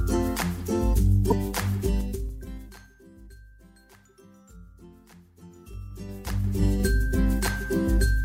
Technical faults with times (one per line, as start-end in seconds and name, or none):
1.30-1.32 corrupt frame decoded
1.79-3.03 zipper noise
5.29-6.83 zipper noise